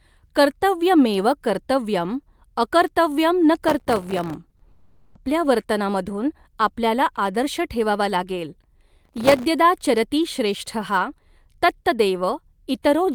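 From 3.69 to 4.34 s, processor overload crackle tears through the speech: dozens of very short buffers miss their deadline and drop to silence, leaving gritty, hard-edged gaps. Short concealed packet loss follows at 4.49 and 4.57 s, where about 20 ms of audio each time is rebuilt from the preceding sound, giving two brief smears. From 4.71 to 5.17 s, about 440 ms is continued as a fading synthetic buzz or hiss with no true silence, most likely a long network dropout, before the speech resumes with that stretch missing. Right after "ठेवावा लागेल", the overload crackle returns from 9.05 to 9.45 s.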